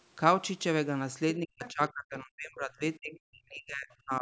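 A speech recording with two faults. From 1.37 s to the end, the talker's speech keeps dipping, at worst by about 40 dB, for around two seconds in total. This is speech suppressed in double talk, likely from an echo canceller ducking the talker while the far side spoke. At 1.65 to 1.70 s, a brief, faint scrap of another voice comes through, about 20 dB below the speech. This is the other side's voice leaking through, likely loudspeaker echo the canceller failed to remove.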